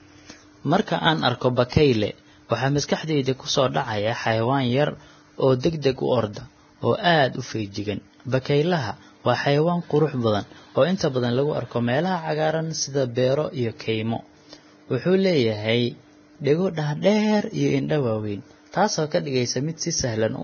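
Speech, carrying heavy codec damage throughout: the treble is hissy and grainy, voiced tones sound roughened, and nothing remains above about 6.5 kHz. The likely cause is low-bitrate Vorbis compression, which fits a rate near 18 kbps, where coarse quantisation turns fine upper detail into noise. Pre-echo appears at 1.69–1.72 s, 5.60–5.63 s, 5.82–5.84 s and 6.33–6.36 s, with a hiss of 24 to 36 ms leading each sharp onset. That happens because quantisation noise scaled to the loud attack spreads across the whole transform block, including the quiet moment before it.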